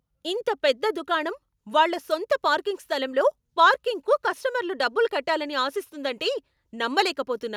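Nothing technical goes wrong anywhere in this bit of speech, so there's no fault to point to at any moment.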